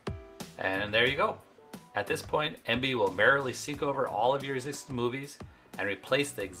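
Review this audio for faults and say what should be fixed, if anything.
A call bitrate drop runs from 2.22 to 5.35 s. The bandwidth estimate fell and the encoder coded far more coarsely, consistent with a fall from about 40 to 17 kbps. The sound degrades for roughly 3 s, then clears. To prevent it, smooth the bandwidth estimator and keep a higher bitrate floor.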